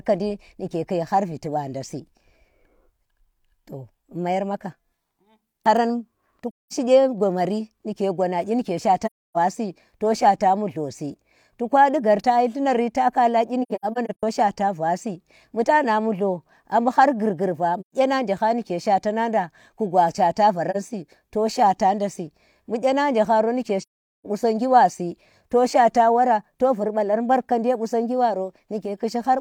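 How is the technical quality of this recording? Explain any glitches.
The recording is marred by six soft dropouts, where the speech fades out to silence and back in. These are AAC frame loss with muting.

The first gap comes at 6.50 to 6.73 s, about 213 ms between "haran to" and "kye gomari nike". Another falls at 9.05 to 9.37 s, about 299 ms. Between "nari ta kala kyi" and "shaata vasi bu tana", 13.62 to 14.23 s holds about 341 ms of scattered holes, the longest around a tenth of a second. A gap of about 128 ms at 17.80 to 17.94 s ends just before "je ha". A brief 43 ms blink comes at 20.70 s, and the longest gap, about 427 ms, runs from 23.82 to 24.26 s.

Each gap is a whole number of blocks of about 43 ms, which fits lost coded frames. The decoder zeroes their spectrum, and the overlapping transform windows taper the sound out and back in, so the edges are smooth.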